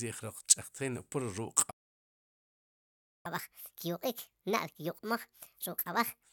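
At 1.70 s the speech stops dead in mid-flow. Silence holds until 3.26 s, a gap of about 1.54 s. This is a playback stall. The likely cause is that the player ran short of buffered data, or its thread was held up, so nothing reached the output. When sound returns, the break is obvious.

From 3.26 s to 6.23 s comes catch-up at higher speed. The player works through its backlog by resampling, at 1.5 times normal speed. Because resampling ties pitch to speed, the speech rises by roughly seven semitones. It sounds hurried and squeaky, like a tape running fast. By 6.23 s most of the delay has been won back. Speed and pitch then drop to normal.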